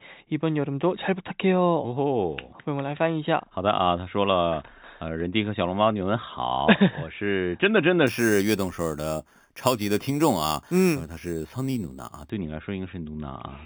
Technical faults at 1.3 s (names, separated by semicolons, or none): none